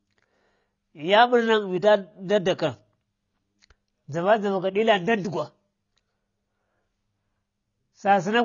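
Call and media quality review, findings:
Low-bitrate audio saved at a high bitrate, throughout the speech: hard band limit, nothing above 7 kHz, with dull, smeared low-rate coding texture. Likely an earlier AAC-LC pass near 24 kbit/s, re-encoded as high-rate MP3 around 256 kbit/s. The second encode preserves the loss but cannot restore the removed band.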